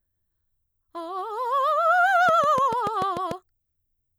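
A train of clicks runs through the music from 2.29 to 3.32 s: roughly seven sharp pulses at a steady 6.8 per second, each much the same shape and standing out roughly 5 dB above the music. The evenly spaced, identical impulses likely come from electrical interference from nearby equipment or a faulty connection or power supply injecting a spike at a fixed interval. It is heard as a regular ticking laid over the music.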